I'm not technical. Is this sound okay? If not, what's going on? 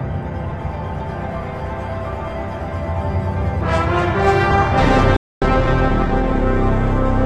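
No. From 3.66 s to the end the sound turns rougher, with more digital artefacts, with no gap: an adaptive stream at a lower bitrate, where a slower connection made the player switch to a lower-quality version. At 5.16 s the sound stops dead for about a quarter of a second, then resumes at 5.42 s: a playback stall, likely because the player briefly ran out of data. From 5.42 to 6.42 s the sound is rushed, about 1.25 times normal speed, at the same pitch: time-compressed catch-up, where the player trims small pieces to make up the lost time.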